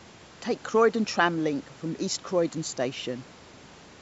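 Nothing stood out as a technical problem on listening to this speech; the thin lowest bass and the lack of anything above 8 kHz are just what normal call microphone processing sounds like.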